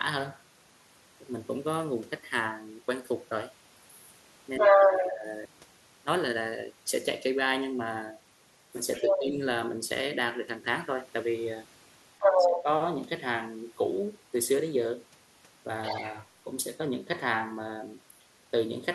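At 4.58 to 5.02 s, 8.96 to 9.23 s, 12.19 to 12.63 s and 15.84 to 16.1 s, the other side's voice leaks through, likely loudspeaker echo the canceller missed. It is around as loud as the talker or louder, except the last, which is well below. Overlapping the first three leaks, at 4.61 to 5.24 s, 9.09 to 9.34 s and 12.25 to 12.67 s, speech is suppressed in double talk. The talker's level dips by roughly 10 to 15 dB, likely because the canceller turned both voices down.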